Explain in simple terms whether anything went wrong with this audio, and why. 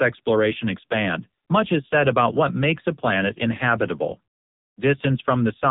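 The speech sounds thin, buzzy and robotic throughout, like a bad phone call, because an AMR narrowband mobile codec compressed it heavily, cutting everything above 3.8 kHz.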